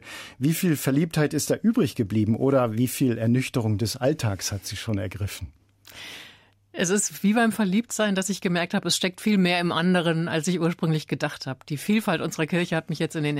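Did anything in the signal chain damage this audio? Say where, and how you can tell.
No, nothing along the chain seems to have damaged this audio, and there's nothing here I'd trace back to any particular stage.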